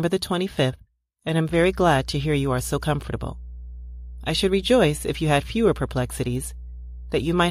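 Speech with mains hum entering at 1.47 s, just after "and am", and continuing to the end of the clip. It is a steady low tone at 60 Hz sitting about 15 dB below the speech, the kind of coupling a ground loop or a nearby transformer introduces from the power line. On a spectrogram it shows as an unbroken horizontal line at 60 Hz from 1.47 s onward, with low harmonics stacked above it; the waveform gains a constant low-frequency ripple beneath the speech.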